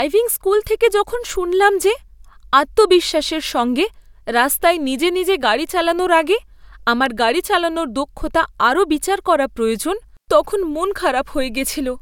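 From 7.06 s to 11.07 s, periodic USB or driver dropouts occur every 2.0 s, each losing a fraction of a millisecond to silence, heard as regular ticks in the speech.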